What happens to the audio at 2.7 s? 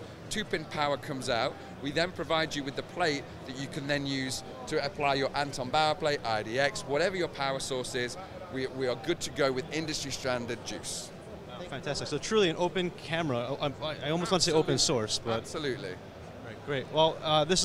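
Nothing goes wrong at 2.7 s; the audio plays through that moment intact, with no dropout, click, distortion or other fault.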